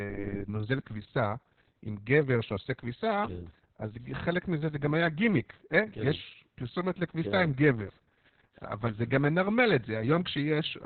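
Opus voice compression runs throughout: heavy narrowband SILK coding, fitting a rate near 6 kbps, removes everything above 4.4 kHz, leaving speech muffled, hoarse and slightly robotic.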